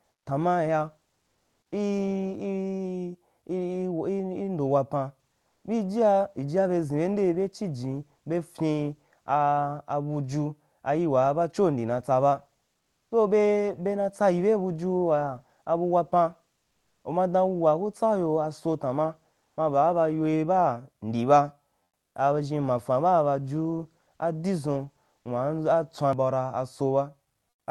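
Comfort noise in place of the background appears at 0.07–0.25, 1.21–1.71, 5.47–5.63, 12.77–13.11, 16.67–17.03, 19.45–19.57, 21.83–22.15 and 27.49–27.67 s. The first comes just before "tanman ya". The real background turns to steady, featureless hiss that shifts in level by up to about 9 dB, likely from Opus DTX. On a spectrogram these are uniform grey patches, and on the waveform they are flat, even bands.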